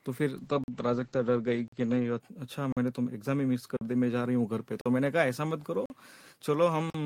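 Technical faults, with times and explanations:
0.37–2.26 s, call bitrate drop: encoding falls from 32 to 11 kbps, so the sound turns rough and muffled; the spectrogram shows a hard ceiling dropping from 20 kHz to 8 kHz.
0.64, 1.68, 2.72, 3.77, 4.81, 5.86, 6.90 s, gap between chunks: 44 ms silent holes after each 1 s chunk, seen as sharp-edged blank columns and flat waveform dropouts.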